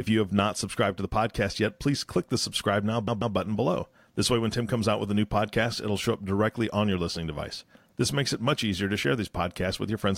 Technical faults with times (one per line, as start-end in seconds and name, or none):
3.07-3.35 repeated frames